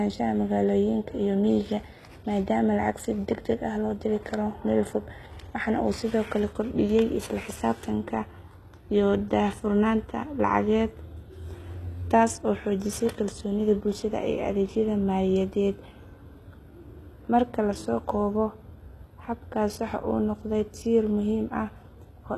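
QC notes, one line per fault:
Throughout: HE-AAC compression, plainly audible. The treble above the crossover is a synthetic copy of lower content, so harmonics fail to line up and s sounds come out gritty and lispy with a metallic sheen. Nothing is present above about 12.3 kHz. The cause is likely a low-bitrate HE-AAC encode, and the degree of damage fits a rate around 16 kbps, where spectral band replication is rebuilding most of the top end.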